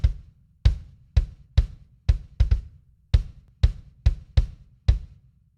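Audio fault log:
3.48 s, overlap between stream segments: two neighbouring segments claimed the same stretch of time, and trimming that overlap discarded 6 ms of real sound. The waveform jumps abruptly, heard as a tiny skip, and a spectrogram shows a thin broadband vertical line there.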